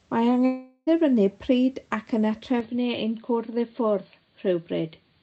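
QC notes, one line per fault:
0.45–0.89 s, long network dropout: The sound stops arriving for about 0.43 s. For roughly the first 0.41 s, the receiver stretches the last sound into a buzzy hiss that fades away. A brief silence of about 40 ms follows. The sound then resumes further on, and about 0.42 s of the original is simply gone. This is likely lost network packets, with the playback side concealing the gap instead of delivering the real audio.
2.60 s to end, input switched to a poorer device: At 2.60 s the tone changes abruptly, with no silence at the join. Before the switch, the Opus call path carries content up to about 8 kHz. After it, nothing remains above 4.6 kHz, so the sound turns dull and boxy. The level drops by about 5 dB. A faint new background noise appears, far below the signal. The likely cause is the input moving to a narrower-band microphone or headset call profile.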